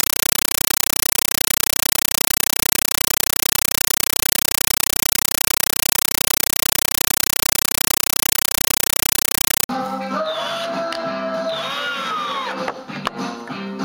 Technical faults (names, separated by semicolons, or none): compressed stream played as audio